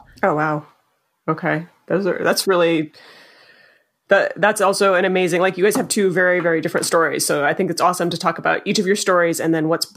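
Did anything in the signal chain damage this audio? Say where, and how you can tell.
No, nothing audible along the chain has damaged this speech recording; the signal arrives intact at every stage from capture to playback.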